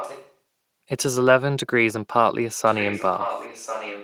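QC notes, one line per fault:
0.00–0.33 s, echo leak: a faint copy of the speech returns about 1.04 s late, some 15 dB down, likely from a far-end speakerphone whose echo canceller let it through. On a spectrogram the same harmonic contours reappear, weaker, shifted right by about a second.
2.65–4.04 s, echo leak: the delayed copy returns at the same 1.04 s lag but louder, around 10 dB below the speech, likely residual loudspeaker pickup the canceller missed. The waveform shows overlapping envelopes, with a fainter repeat of each burst trailing one second behind.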